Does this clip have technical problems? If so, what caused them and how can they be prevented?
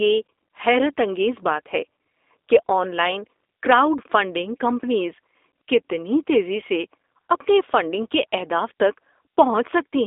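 Yes. Throughout the speech, a G.729 codec is clearly audible. Nothing is heard above about 3.8 kHz, and the band sits near 300 Hz to 3.7 kHz. A plain telephone band-limit would only sound muffled, but here the speech is also rough and slightly synthetic. That texture comes from rebuilding each 10 ms frame from a vocal tract filter, a pitch predictor and a few pulses, which fits a low-rate codec at 8 kbit/s. To prevent it, carry the call over a wideband, higher-bitrate codec such as G.722 or Opus.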